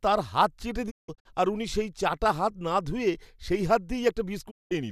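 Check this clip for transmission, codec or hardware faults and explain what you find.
Two digital broadcast dropouts in this speech. From 0.89 to 1.27 s, after "তাঁর হাত চেটে" and before "আর উনি সেই চাটা", the receiver lost frames and muted, giving short silent holes with 20 ms fades. The longest hole is 168 ms. The second dropout, from 4.49 to 4.73 s, is a single 192 ms gap.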